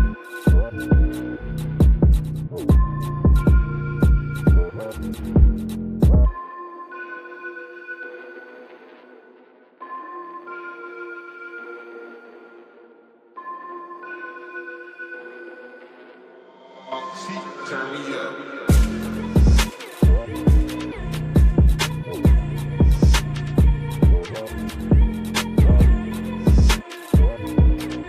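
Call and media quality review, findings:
Nothing stood out on listening to this recording, and there is no fault to log against it.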